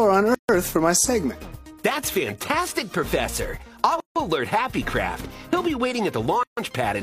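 You get three short dropouts at 0.35, 4.00 and 6.43 s, each around 140 to 160 ms, where the audio drops out and then picks up where it left off. That's a gap at a join of encoded pieces: encoder start delay and last-frame padding left untrimmed between separately encoded chunks.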